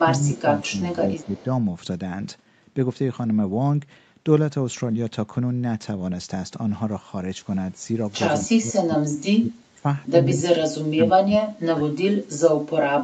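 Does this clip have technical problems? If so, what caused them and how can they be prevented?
Yes. Speech suppressed in double talk occurs from 0.08 to 0.42 s, 0.70 to 1.45 s, 8.38 to 9.86 s, 10.29 to 11.57 s and 11.73 to 12.41 s. Early on the voice dips by about 10 dB. Later it sinks by about 25 to 35 dB and nearly cuts out. The likely cause is an echo canceller that, while both sides were talking, could not tell this talker from loudspeaker echo and turned everything down. A better double-talk detector, gentler suppression or headsets would prevent it.

Echo leak occurs at 0.33 to 0.42 s, 0.64 to 0.70 s and 1.16 to 1.44 s. Faint delayed copies of the voice trail 193 ms behind it, about 25 to 30 dB below the speech. This is likely a loudspeaker's output reaching the far microphone and slipping partly past its echo canceller, so scraps were sent back. Headphones, a lower speaker volume or better-adapted echo cancellation would prevent it.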